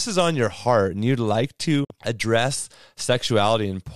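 Right after "heart and you'd like", at 1.84 s, there's a digital broadcast dropout. The receiver lost good frames and muted, so the speech fades out over about 8 ms and sits silent until 1.91 s. Roughly 48 ms is simply gone, which fits a couple of lost frames.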